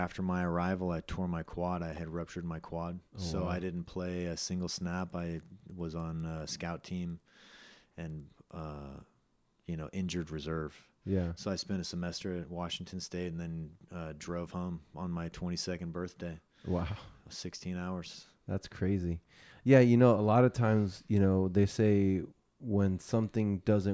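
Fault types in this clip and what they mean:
Resampler restarted on every block: from about 4.9 to 9.2 s the speech picks up a steady tick ten times a second, so the conversion was done in 100 ms blocks with each one handled on its own. At every block edge the converter had no real neighbouring samples to work from, leaving a small error there. The ticks ride along with the speech rather than sitting on silence, and the result fits a downsample from 44.1 kHz to 16 kHz.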